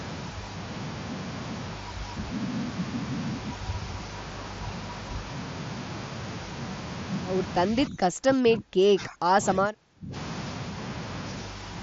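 A speech recording in which the talker's level collapses between 7.7 and 10.14 s, falling by as much as roughly 30 dB and thinning or breaking up for about two seconds in total. The likely cause is speech suppressed in double talk: an echo canceller, faced with both ends talking at once, treated the near voice as echo and pushed it down. Unlike a packet-loss dropout, the damage comes as uneven dips and fragmented attenuation rather than clean gaps or repeated chunks. The audio also passes through a Bluetooth mSBC headset link, which shows up as a band that stops near 7.7 kHz.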